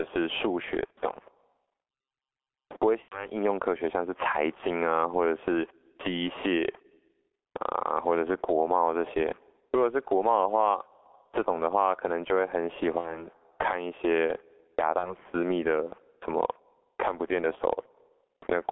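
Across the whole clip, the level swings by around 20 dB, ducking whenever speech gets loud. This is gain pumping. The likely cause is gain set far too high, with a fast limiter clamping every loud syllable. Loud and quiet passages sound squashed together.

The speech is also heavily damaged by the G.723.1 codec throughout. Nothing comes through below 300 Hz or above 3.4 kHz. The voice sounds muffled and hoarse, and consonants smear. The coarse, slow-updating quality fits a rate near 6.3 kbit/s.

VoIP packet loss concealed by the speech codec breaks in at four points: 0.86 to 0.91 s, 3.02 to 3.30 s, 12.99 to 13.26 s, and 14.99 to 15.15 s. The decoder fills each gap by stretching the last sound, fading it out. The weakness lingers after the gap ends. The gap at 3.02 s sounds longest, fitting about 90 ms lost.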